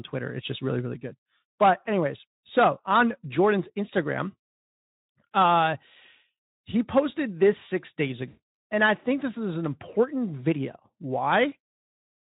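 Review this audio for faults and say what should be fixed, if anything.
Just after "posted this six days", from 8.27 to 8.42 s, there is VoIP packet loss concealed by the speech codec. The decoder is missing its data, so it stretches the last pitch and spectral shape into a buzzy tone or coloured noise that fades, consistent with about 260 ms of lost packets. Unlike a plain dropout, there's no silent hole. The sound smears into a decaying synthetic tail. Unlike the light, steady coding damage of the Speex codec, it is confined to this one span. To prevent it, use a larger jitter buffer with forward error correction or redundancy, and carry the call over a less lossy network path.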